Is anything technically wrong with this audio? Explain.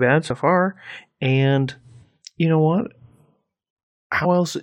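Yes. The speech has compressed frames skipped at three points: at 0.29 s, from 2.01 to 2.04 s, and from 4.24 to 4.26 s. Whole coded frames never reach the output, because they are missing or the decoder rejected them as damaged, so playback jumps ahead by about 20 ms, about 70 ms and about 50 ms respectively. On the waveform the speech envelope shows a sudden discontinuity. On a spectrogram the harmonic tracks break and resume at a different point.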